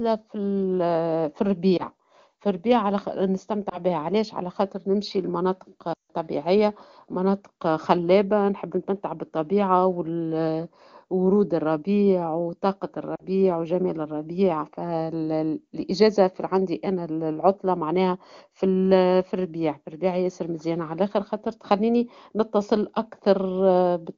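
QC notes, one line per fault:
1.77–1.86 s, 3.69–3.78 s (before "بها علاش"), 5.93–6.11 s (after "على خاطر نمشي المناطق"), 13.16–13.22 s: lost AMR speech frames. Corrupted frames were concealed by repeating the last good pitch and spectral shape at falling gain. Single 20 ms losses give brief dips or warbles, seen as a waveform notch and smeared harmonics. The 40 ms loss is longer. The 160 ms run drops to near silence within two frames, followed by a weak, rough onset. The AMR wideband codec runs at 23.85 kbit/s, where speech is clear.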